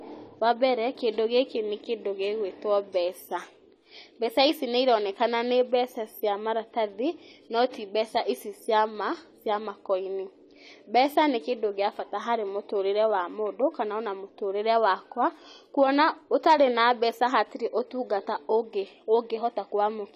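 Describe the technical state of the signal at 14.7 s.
At 14.7 s the speech has plainly audible AAC compression: a dulled, smeared sound with nothing above 14 kHz. This is likely AAC-LC encoding at a low bitrate, around 32 kbps, where quantising against a hearing model drops high bands and blurs detail.

The moment also falls within the clock slip clicks that run from 0.25 s to 19.9 s: regular single ticks about every 1.5 s. They likely come from two unsynchronised clocks differing by roughly 15 ppm, so one sample is dropped or repeated whenever the drift reaches a whole sample.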